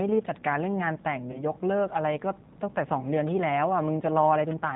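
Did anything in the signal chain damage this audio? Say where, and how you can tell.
Yes, at two stages. At the codec stage, the speech runs throughout through a low-rate G.729 codec, and the damage is plainly audible. Nothing survives above 4 kHz, and the voice sounds rough and slightly synthetic, which fits the 8 kbit/s G.729A variant. That codec discards the waveform and rebuilds each 10 ms frame from a vocal-tract filter, a pitch predictor and a handful of pulses, so fine detail and breathiness are lost.

At the network stage, there is VoIP packet loss concealed by the speech codec from 1.32 to 1.44 s. About 20 ms of audio went missing, consistent with a single dropped packet. The decoder filled the hole by extending its last pitch and filter settings at falling gain, which gives a brief stretched sound that fades. Because each frame builds on the previous one, the sound stays weakened or distorted for tens of milliseconds or more after the data resumes.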